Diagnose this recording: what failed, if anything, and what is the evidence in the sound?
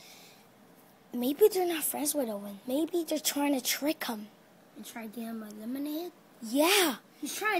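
Nothing failed; no fault is audible in the recording.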